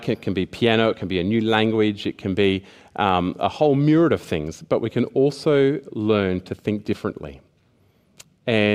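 The speech recording carries no audible technical fault, and the signal stays steady and continuous throughout.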